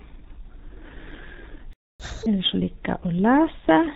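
From start to finish the speech carries the sound of the G.723.1 codec, heavily damaged. Nothing reaches above 4 kHz, so it is muffled, and the slow-updating voice model leaves it hoarse with smeared consonants, which fits a rate near 6 kbit/s. This steady low-bitrate coarseness is unlike a simple low-pass filter, which would leave the voice clean.

At 1.73 s the sound cuts out in mid-flow and stays fully silent until 2.00 s, a gap of 265 ms. This is a playback stall, most likely the player running out of data. Unlike a packet-loss dropout, there is no concealment buzz or faded repeat, only dead silence.

From 2.00 to 2.26 s the player works through its backlog with catch-up at higher speed. The audio runs at twice normal speed, with pitch raised by roughly ten semitones. Speed and pitch then settle back to normal. A pitch-preserving time-stretch would not produce this raised, chipmunk-like tone.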